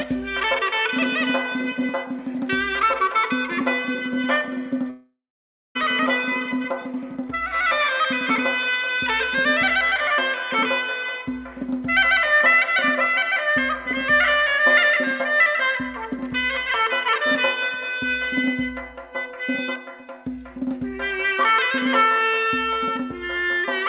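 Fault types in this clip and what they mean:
Long network dropout: At 4.9 s the sound breaks off for about 0.87 s, until 5.77 s. The receiver carries the last sound forward as a buzz that fades away. About 0.57 s of near silence follows. The sound then resumes with that stretch simply gone. The likely cause is lost packets on a network link. The narrow band, with nothing above 4 kHz, points to a telephone-grade call codec such as G.711.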